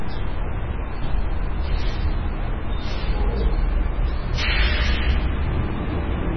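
Throughout the clip the sound is watery and swirling, with metallic chirps on sharp, bright sounds, smeared attacks, and nothing heard above 6 kHz. This is likely heavy MP3 compression at a very low bitrate, around 16 kbps. The encoder cut the treble and let weak frequency lines flicker on and off between frames.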